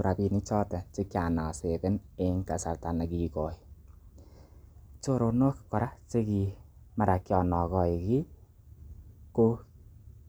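No dropouts, clicks, distortion or other technical faults can be heard anywhere in the speech.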